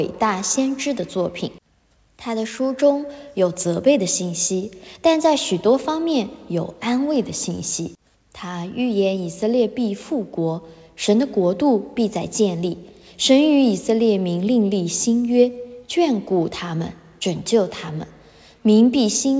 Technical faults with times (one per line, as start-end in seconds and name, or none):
none